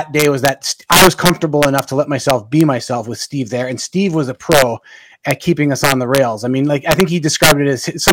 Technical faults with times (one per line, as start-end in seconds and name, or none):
0.00-8.12 integer overflow